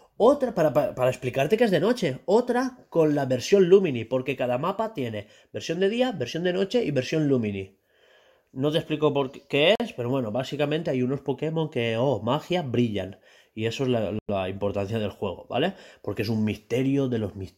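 A speech clip with two brief dropouts to silence: about 44 ms at 9.75 s, after "te explico por qué", and about 101 ms at 14.19 s, after "eso es la". Each time the speech picks up again, most likely a Bluetooth stall, where delayed packets let the headphones' buffer empty.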